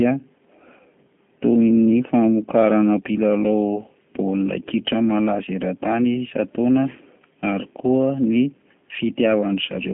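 From start to end the speech runs through G.729 coding, at what sounds like 8 kbit/s. Rebuilt from a vocal tract filter, pitch predictor and sparse pulses, it sounds plainly rough and synthetic, with nothing above 3.5 kHz.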